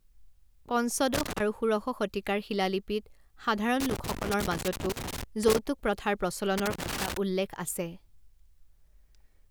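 A speech recording with loose connector crackle in three irregular bursts: 1.14 to 1.40 s, 3.80 to 5.59 s, and 6.58 to 7.17 s, just before "উল্লেখ আছে". A worn or dirty contact rapidly making and breaking chops the signal, producing scratchy crackle. On a waveform the bursts show as ragged, broken stretches with sharp edges. On a spectrogram they appear as clusters of thin vertical broadband streaks scattered unevenly across each span.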